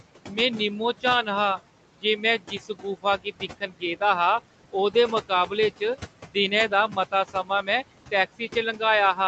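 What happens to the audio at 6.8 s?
Speech cut by the noise suppressor, from 6.69 to 7.68 s: the suppressor mistook parts of the speech for background and turned them down by up to about 14 dB, so roughly a third of a second of speech sounds swallowed and faint. Noise suppressor artifacts are also present here: the steady noise is pushed down by about 18 dB between sounds.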